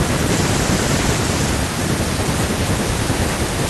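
Nothing in this recording stands out as a technical fault; the speech comes through without any glitch or disturbance worth pointing to.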